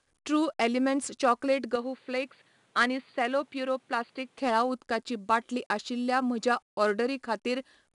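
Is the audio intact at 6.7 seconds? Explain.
No. 4-bit ADPCM compression runs through the whole recording, so the speech at 6.7 s carries it too. Each sample is stored as a coarse 4-bit step from a predicted value, with the step size adapting as it goes, so the error rides along as a gritty hiss that tracks the loudness of the speech. Nothing is present above 10.7 kHz, and the dulled top end fits a lowered sample rate near 22 kHz.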